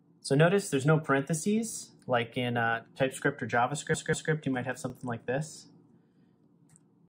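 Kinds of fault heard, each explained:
Repeated buffer: A brief click or buzz at 1.72 s and again at 4.90 s, each a 20 ms piece heard twice with a hard join. Fresh audio arrived late, so the playback device replayed its last buffer once, losing essentially nothing.
Repeated frames: A stutter from 3.94 to 4.32 s, where a 192 ms block plays two extra times. Compressed frames were written or sent more than once, which fits six frames, and the audio runs 384 ms longer.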